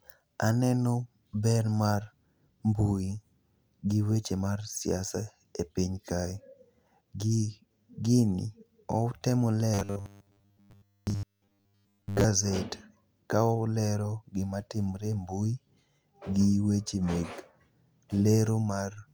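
Speech clip with robotic sound from repeated short buffers between 9.74 and 12.24 s: the whole stretch becomes a rigid 100 Hz metallic buzz, likely from a starved buffer replaying its last 10 ms. A spectrogram shows evenly spaced 100 Hz harmonics; the waveform shows near-repeating 10 ms cycles.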